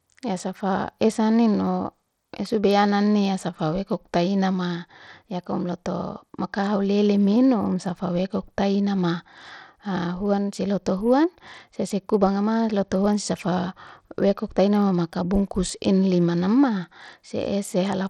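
Bluetooth SBC compression runs throughout, likely: coarse sub-band quantisation leaves gritty noise on the speech and nothing above 18.4 kHz, which fits an 80 kbps stream.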